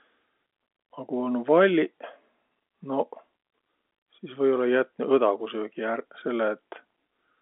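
No technical faults can be heard anywhere in this speech recording. It carries the narrow sound of G.711 telephone coding, with the voice confined to roughly 200 Hz to 3.5 kHz and nothing reaching above about 3.7 kHz.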